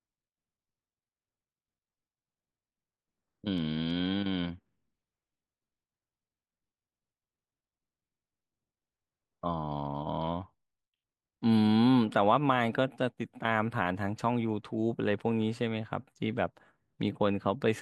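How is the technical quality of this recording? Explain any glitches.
No glitches or technical faults can be heard anywhere in the recording, and the signal holds steady throughout.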